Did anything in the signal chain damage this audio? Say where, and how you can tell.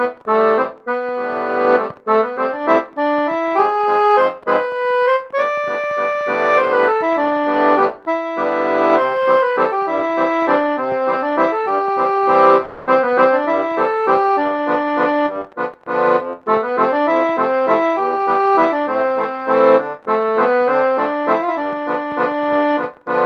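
Yes. Network stage: at 12.65 s a buzzy fill fades until 12.89 s, and about 220 ms is missing, likely a long network dropout.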